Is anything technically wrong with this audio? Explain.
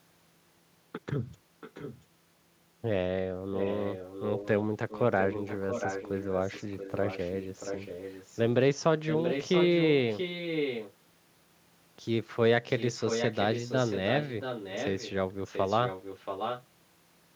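Yes, there's an echo leak: a delayed copy of the speech, about 0.68 s behind, at 1.61–2.04, 3.55–8.4, 9.1–10.93, 12.78–15.11 and 15.45–16.64 s. It's faint in the first stretch and loudest around 9.1–10.93 s, where it's close to the speech level. The likely cause is a loudspeaker on the far end whose echo canceller let part of the mic's pickup through and sent it back down the line.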